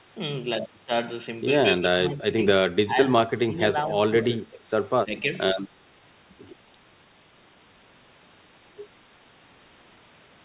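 Speech over a narrowband call path with nothing above 4 kHz, which fits G.711 A-law, shows speech suppressed in double talk: the level dips by about 10 to 20 dB at 1.76–2.38, 2.84–2.96, 3.29–3.57, 4.24–4.61 and 5.04–5.31 s, likely from an echo canceller muting the talker while the far end also spoke.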